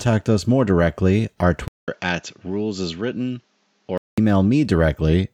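From 1.68 to 4.18 s, after a 200 ms gap, speech turns dull, with nothing above 7.6 kHz: likely an input switched to a poorer device.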